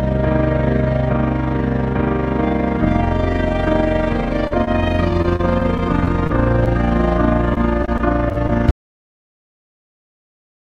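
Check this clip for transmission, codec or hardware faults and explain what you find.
Quite a lot is going on here, from a steady flutter under everything to a run of network glitches and finally a hard cut.

The overlap-add ripple runs the whole way through. The audio was chopped into windowed frames and stitched back with an overlap that doesn't add up to flat gain, so the level pumps by about 6 dB once per frame. That's somewhere around 30 times a second, which gives a fast, rough tremolo sitting over every sound in the clip.

At 4.47 to 4.52 s there's a short concealed packet loss. About 20 ms of audio never arrived, and the receiver papered over it by extending the last sound for roughly 31 ms before blending back into the real signal. You hear it as a quick smear or wobble, and whatever short detail was in that hole is simply gone.

Right after, at 4.64 to 4.69 s, comes a short stall from a late packet. 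Nothing is lost this time. The jitter buffer ran dry, so the last sound got stretched by about 26 ms until the packet showed up, and playback then carried on from the same spot. It comes across as a sound hanging on a touch too long, with a faint buzz or dip.

Repeated packet loss (robotic sound) shows up twice. From 5.11 to 6.68 s there are eight separate holes, none longer than 25 ms, totalling about 80 ms missing and 130 ms patched. From 7.54 to 8.51 s there are seven more, up to 28 ms each, with about 120 ms missing. Each gap gets filled by continuing the previous sound, and the next one arrives before things settle, so both stretches sound choppy, with pieces missing.

Finally, at 8.71 s the audio dropout to silence hits and lasts to the end. The signal stops mid-flow and drops to silence, with no room tone at all. That points to the input vanishing while the recorder kept writing, most likely a disconnected device, a failed link or a mute, and anything after that point is lost.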